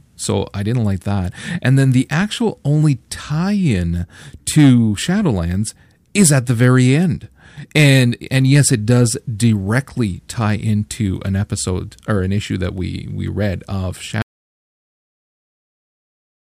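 A speech recording with two faults. Hard clipping hits four stretches: 4.58 to 4.72 s, 6.18 to 6.93 s, 7.76 to 8.02 s, and 8.38 to 9.02 s. The signal overruns the stage it passes through by about 3 to 5 dB. The worst is the 6.18 s stretch, at about 5 dB. Peaks are sliced flat. The flat tops add high harmonics, heard as a gritty crackle on the louder syllables. Then an audio dropout to silence begins at 14.22 s and runs to the end. The sound stops mid-flow. No room tone remains, just silence. The likely cause is the input being lost, through a disconnected device, a failed link or a mute, while recording carried on writing silence. Anything spoken after that point is gone.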